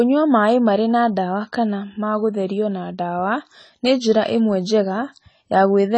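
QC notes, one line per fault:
Throughout, AAC compression: the speech sounds dull and smeared, with nothing above 10 kHz and plainly audible warbling and fizz on sibilants, likely from a low-bitrate AAC-LC encode that quantised too coarsely, cutting the top band, consistent with 24 kbps.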